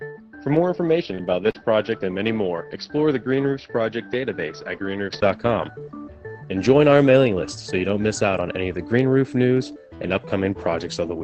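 From the start to 5.23 s the sound is dull and boxy, with nothing above 5.8 kHz, a level about 5 dB lower, and a faint new noise floor about 50 dB down. It then clears after a 20 ms silence. This points to an input switched to a poorer device, likely a narrower-band microphone or headset profile, before the input returns to the better one.

At 1.15 to 1.23 s there is a short concealed packet loss. About 20 ms of audio never arrived, and the receiver extended the preceding sound to cover the hole, which adds roughly a hundredth of a second. It is heard as a brief smear. A second concealed loss at 1.51 to 1.57 s covers about 40 ms and gives a longer wobble.

Inside each of those events, a lost packet was rebuilt from error correction: 20 ms at 1.18 to 1.20 s and 20 ms at 1.55 to 1.57 s. These frames came from a low-bitrate backup copy, so there is no gap, but they sound rougher and noisier than the audio around them. 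The call path itself, whose top end sits near 8 kHz in keeping with a low-bitrate Opus setting, adds its usual coding grain throughout.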